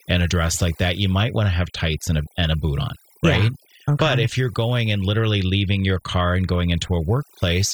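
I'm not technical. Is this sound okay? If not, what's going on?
No. Overdone noise removal affects the speech from start to finish. A noise-cleaning tool was set too strong. It shuts off any sound close to the background hiss, so quiet parts of the voice vanish too. The leftover background breaks into twinkling, warbling specks.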